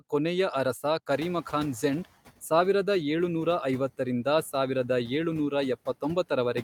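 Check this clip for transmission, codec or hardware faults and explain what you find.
One fault is present, in the noise suppression stage.

From 1.11 to 2.05 s, after "ಕೊನೆಯ ಅರಸ", the noise suppressor is catching up. Room noise rises by about 24 dB near the 1 s mark, and the suppressor's noise estimate lags. The noise passes through with less reduction at first, then sinks by about 8 dB over 940 ms, settling by "ಸಾವಿರದ ಏಳುನೂರ".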